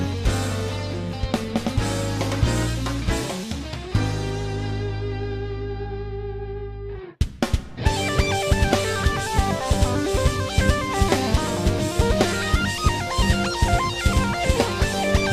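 The signal holds steady throughout, with no technical faults to be heard at any point.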